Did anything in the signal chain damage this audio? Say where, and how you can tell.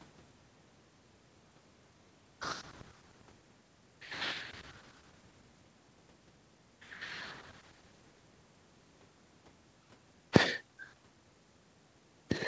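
No, nothing in the signal chain damaged this speech. It has passed through call microphone processing and a WebRTC call path, and the audible band stops at 8 kHz with nothing above it, which points to a wideband call codec such as G.722 at 64 kbps.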